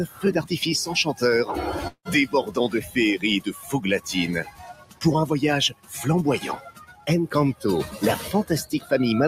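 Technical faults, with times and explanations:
Throughout: noise suppressor applied to music or sounds. A speech-tuned suppressor treats sustained tones, ambience and decays as noise, so level swings by roughly 15 dB, pumping and thinning the sound. The waveform envelope breathes unevenly, and the spectrogram shows held energy fading while onsets stay bright.
0.06–0.24 s, 2.82–2.97 s, 3.47–3.73 s, 4.44–5.03 s, 5.70–5.94 s, 6.58–7.09 s, 8.65–8.92 s: sound cut by the noise suppressor. Steady or fading parts sink by about 13, 11, 8, 17, 17, 15 and 11 dB, each dip lasting about 0.15 to half a second. The waveform shows sudden hollows, and the spectrogram shows tails cut short.
1.87–2.08 s: long network dropout, likely the cause of a gap of about 180 ms. The last sound carries on as a fading buzz for about 176 ms, then about 80 ms of near silence follows before audio resumes with that stretch missing. 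The spectrogram shows smeared, decaying texture, then a blank band.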